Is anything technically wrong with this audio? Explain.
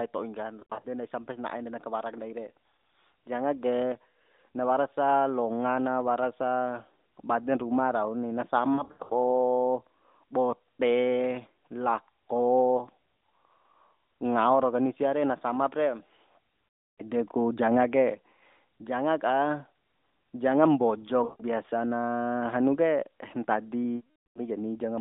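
Yes. The speech has lost AMR speech frames at 0.60–0.86 s, 8.74–9.13 s (right after "baden ruma rauni na"), 16.74–17.02 s (just before "ku janga"), 21.24–21.44 s (just before "na hanu ke"), and 23.96–24.41 s.

Radio errors corrupted frames, so the decoder repeated the last good pitch and vocal tract settings at falling gain. The first two are scattered losses with runs of at most 80 ms, heard as brief warbling dips. The later ones, up to 0.4 s, smear and fade toward silence. All of this sits within the AMR-NB phone band of roughly 200 Hz to 3.7 kHz.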